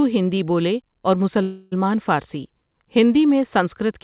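At 1.42 to 1.75 s the sound stalls into a fading buzz for about 0.3 s, then resumes intact: a call audio freeze, likely from delayed packets emptying the jitter buffer.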